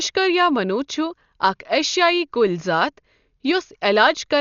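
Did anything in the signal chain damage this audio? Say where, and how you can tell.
Yes, at the codec stage, throughout the speech: it's dull with nothing above about 6.9 kHz, and tones carry a rough, fluttery noise. That's likely heavy Dolby Digital compression at a bitrate around 48 kbps, where starved frequency lines get filled with dither noise.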